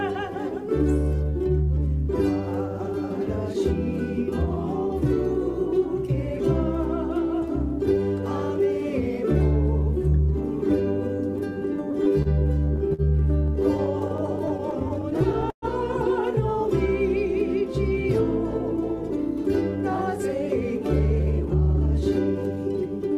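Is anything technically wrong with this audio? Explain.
Yes, two kinds of playback fault are audible.

From 11.91 to 13.01 s and again from 13.46 to 15.65 s the audio hesitates and drags in repeated stalls (stutter). The first span has 8 brief holds, none longer than 51 ms. The second has 20, the longest 120 ms. About 14% of each span is filled in. Packets arrived late, so the jitter buffer kept running dry, and the receiver stretched the last sound, fading it over the longer waits. Nothing is lost, only delayed.

Later the sound turns hurried at an unchanged pitch. From 19.69 to 20.40 s the rush is slight, about 104% of normal speed, trimming a few tens of milliseconds. From 20.83 to 22.02 s it is clearly rushed, around 118%, trimming roughly a fifth of a second. This is jitter buffer speed-up: after the late arrivals the buffer held surplus audio, and the receiver cut many pitch-period-sized slivers to pull the delay back down.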